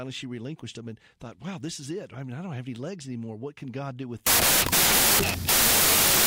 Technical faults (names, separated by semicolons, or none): wrong sample width